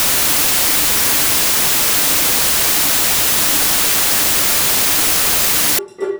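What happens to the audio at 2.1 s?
At 2.1 s the audio is inside a wrong sample width fault running from 0.0 to 5.79 s: 32-bit integer samples are read as packed 24-bit, scrambling bytes across samples. The sound becomes loud noise with the original buried underneath, slowed to 0.75 speed with lowered pitch.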